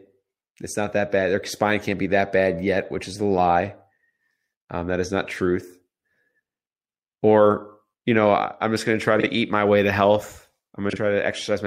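Frames out of order at 9.20–9.27 s and 10.90–10.96 s: two adjacent 32 ms blocks play swapped, giving a brief garbled flutter.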